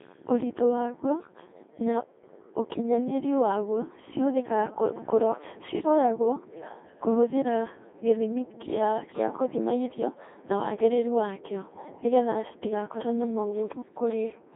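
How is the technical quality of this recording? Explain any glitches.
Pretty rough, honestly. The whole clip has gone through a Codec 2 vocoder, and the damage is heavy from start to finish. Codec 2 doesn't keep the waveform. It sends only pitch, voicing, energy and a coarse spectral envelope, then rebuilds the speech from sine waves. So what you hear is buzzy and robotic, with a synthetic, pitch-locked quality. The sound sits in a narrow 250 Hz to 3.6 kHz band with nothing above 3.8 kHz, and the coarseness fits the 2.4 kbit/s mode.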